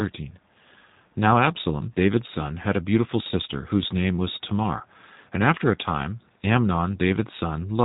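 Speech is being rebuilt by a G.729 codec, most likely the G.729A variant at 8 kbit/s, from a vocal tract filter, a pitch predictor and a few pulses per frame. The damage is plainly audible throughout: nothing above 3.8 kHz survives, and the speech sounds rough and synthetic.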